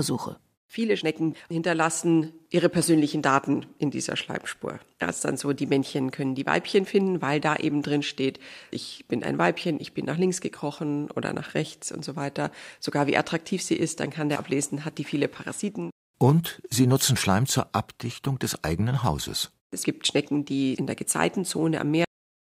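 Speech that stops abruptly at 22.05 s, mid-sound, and falls straight to digital silence for the final 0.36 s with no natural decay. This is a cut-off end: the last buffers of audio were never written or played out, so the signal simply ends.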